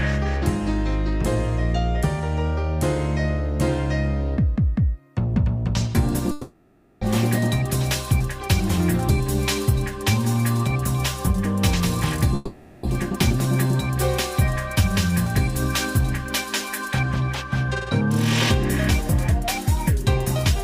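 At 6.31 s the sound gives way to a smeared, buzzy continuation that fades over about 0.7 s before the audio picks up again at 7.02 s, with that stretch gone. The same happens from 12.35 to 12.84 s, about 0.48 s of filler. Both look like a long network dropout: likely the packets never arrived, so the receiver stretched out the last sound it had to cover the gap.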